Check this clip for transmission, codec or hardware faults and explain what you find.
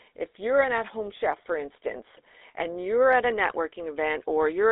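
One fault runs through the whole clip: GSM full-rate codec damage. The speech is band-limited to about 300 Hz to 3.7 kHz, and it has that gravelly, buzzy edge from a vocal-tract model driven by a regular pulse excitation. The sound fits a 13 kbps GSM full-rate coding.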